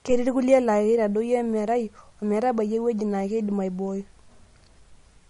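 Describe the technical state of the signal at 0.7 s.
MP3 compression artefacts run through 0.7 s and the whole clip. The speech has nothing above 10.6 kHz and a plainly audible watery smear, which fits a low bitrate around 40 kbps in a likely MP3 encode.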